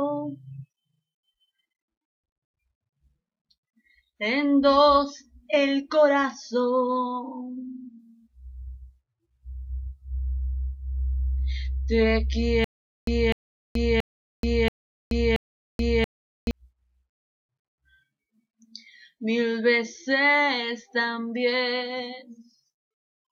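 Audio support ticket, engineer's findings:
Channel delay (comb filtering), 6.60–7.99 s. Dull top end, notch near 10 kHz. One channel lags about two samples. Mono sum cancels shared content.

Stutter with silent gaps, 12.64–16.51 s. 250 ms fragment repeats five times, 430 ms digital silence between. Likely player stall, retry replaying last buffer. Audio lost.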